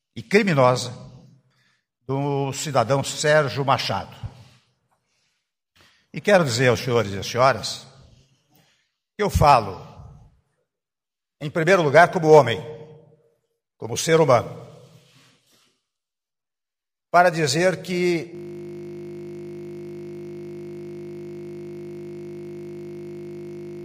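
At 18.35 s the audio locks into a system hang loop and stays there to the end. A single 20 ms fragment repeats exactly, back to back, so the sound collapses into a steady buzz at 50 Hz, the loop rate, for the final 5.5 s. This happens when the host or driver stalls while the sound hardware keeps replaying the same short ring buffer. A 20 ms cycle is short enough to fuse into a tone rather than a stutter.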